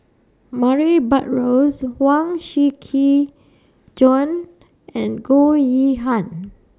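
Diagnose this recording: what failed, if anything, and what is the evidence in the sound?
No fault found in this recording.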